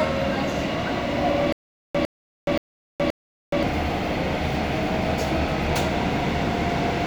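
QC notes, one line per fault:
1.53–3.63 s: stutter with silent gaps. A 105 ms burst repeats four times, separated by 421 ms of silence. Likely a stalled stream replaying its last fragment.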